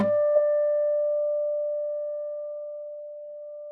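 A short recording of sound with one instance of short concealed packet loss, between 0.33 and 0.37 s. Roughly 20 ms of the stream arrived too late for the decoder, and the receiver covered the gap with about 18 ms of synthesized continuation, extending the preceding sound and then crossfading back into the real signal. It comes across as a brief smear or wobble at that point, with a small stretch of the original sound lost to the patch.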